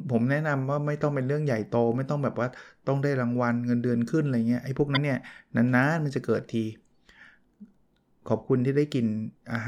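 At 4.93 to 4.97 s the speech briefly breaks up from damaged data in a compressed stream: corrupt bytes make the decoder misread frames and lose sync.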